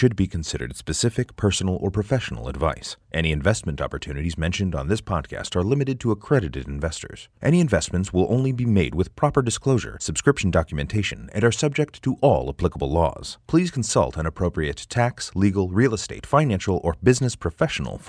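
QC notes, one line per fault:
No faults found.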